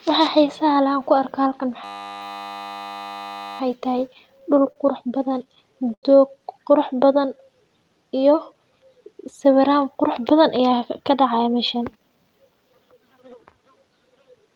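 At 1.84 s things lock up in a system hang loop that runs until 3.6 s. The machine or driver froze, and the sound hardware kept replaying the same 10 ms slice of its ring buffer, 176 times in a row. Because the loop is so short, you don't hear a stutter. You get a steady buzz at 100 Hz, a flat droning tone where the speech should be. Hardly any speech is actually lost, since playback resumes right after it.

Then come two patches of repeated stalls (stutter). From 4.07 to 4.78 s there are six gaps, the longest 41 ms, with 83 ms filled in altogether. From 5.18 to 6.05 s there are seven, the longest 90 ms, totalling 146 ms. Packets were arriving late, the jitter buffer kept running dry, and the receiver stretched out the last sound to bridge each hole. Nothing is missing, but the speech drags and hiccups.

From 7.05 to 7.99 s there's a jitter buffer slow-down. The buffer was short on reserve, so the receiver padded it by repeating pitch periods and bits of pauses, adding 93 ms in total. 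Playback drops to 91% speed with the pitch unchanged, so sounds come out a little drawn out and sluggish.

Finally, from 9.96 to 12.24 s, the opposite happens with a jitter buffer speed-up. Too much audio had piled up, so the receiver cut out short pitch-period chunks, about 150 ms in all. The speech runs at 107% speed, still at normal pitch, and comes across as slightly rushed.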